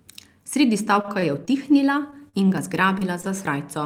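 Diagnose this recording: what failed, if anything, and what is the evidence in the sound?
From 1.01 to 1.52 s the speech turns choppy, with small pieces missing. This is repeated packet loss in the network path: four gaps, the longest 25 ms, land close together. The receiver bridged each one by extending the preceding sound, so about 18% of that half-second is synthetic fill. The holes come too often for the patching to pass unnoticed.

Four brief smears or wobbles follow at 2.11–2.21 s, 2.29–2.35 s, 2.99–3.03 s and 3.21–3.25 s. Each is a short concealed packet loss, also from the network. The gaps are 20 ms, 40 ms, 20 ms and 20 ms. The decoder covered each one by carrying the last sound forward, as pitch or as shaped noise, then crossfaded back. The 40 ms gap at 2.29 s has the longest fill. The first event also stretches the timing slightly.

Small forward jumps in the speech occur at 2.58 s and 3.47 s, with no silence between the joined sides. 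This points to a dropped buffer (overrun) at the driver or buffer stage. The likely cause is that the capture software fell behind, so the hardware overwrote samples before they were read. Roughly 20 ms is lost at the first jump and about 10 ms at the second, and the remaining audio is spliced directly together.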